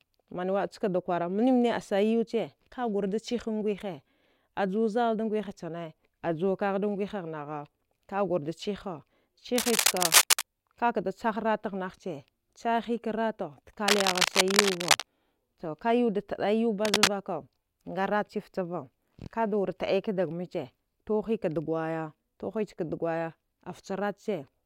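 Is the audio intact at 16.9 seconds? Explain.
No. From 16.85 to 17.08 s there is cable scratch noise: a worn cable or connector was likely moved, making its contact resistance jump erratically and inject dense, uneven bursts of noise. For that quarter-second a scratchy rustle sits over the speech, somewhat louder than it.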